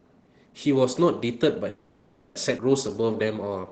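A call audio freeze runs from 1.69 to 2.36 s. The speech stops advancing and the last sound is stretched into a fading buzz for 660 ms. When the audio resumes, it picks up exactly where it left off with nothing lost. This likely happened because delayed packets drained the jitter buffer.

A skip ahead follows at 2.57 to 2.59 s. About half a second of speech is dropped, either discarded from an overfull buffer or lost in transit, while newer audio was already queued. Playback lurches forward with only a 10 ms seam joining the two sides.

A jitter buffer slow-down spans 2.89 to 3.67 s. To rebuild its reserve, the receiver repeats single pitch periods and slivers of pause, adding 103 ms. The speech plays at 88% speed with unchanged pitch, sounding drawn out. Throughout, the audio stays band-limited to 8 kHz, consistent with Opus at a low call bitrate.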